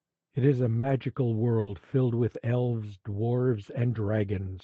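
A speech recording carried over a call link, with the highs ending around 8 kHz as the codec band limit suggests. At 0.79 to 0.85 s there is short concealed packet loss. About 40 ms of audio arrived too late to decode. The receiver extended the preceding sound to cover the hole and then blended back in, leaving a brief smear. At 1.59 to 1.69 s a burst of packet loss follows. Roughly 80 ms went missing. The receiver stretched the last sound and lowered its level as the gap lengthened, so a fading buzz or hiss replaces it. The speech then picks up later, with that stretch gone.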